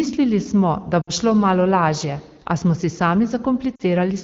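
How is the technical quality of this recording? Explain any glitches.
Two short glitches break up the speech, heard over the clear wideband quality of AMR-WB (HD Voice) coding. Both are lost AMR speech frames, at 1.01 to 1.10 s and 3.75 to 3.83 s. The decoder extended the last good pitch and vocal tract settings at falling gain, so the speech smears and fades to near silence rather than cutting off abruptly, as a plain dropout would. The 60 ms and 40 ms gaps fit three and two 20 ms frames.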